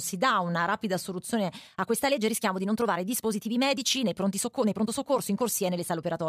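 The clip is speech, and from 1.65 s to the end, right after "dà una rapida soluzione", it turns into a time-stretched section running about 1.42 times faster. The pace jumps abruptly and the sound turns rushed, yet the pitch does not rise. That steady pitch separates it from a plain speed-up or sample-rate mismatch, where everything would shift upward. The likely cause is software squeezing the audio to fit a set length by dropping short pieces.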